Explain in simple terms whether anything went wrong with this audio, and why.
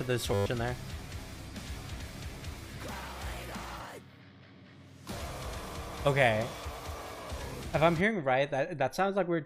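From 0.34 to 0.46 s there is a system hang loop. The computer froze briefly. A 10 ms scrap repeated twelve times, making a 100 Hz buzz.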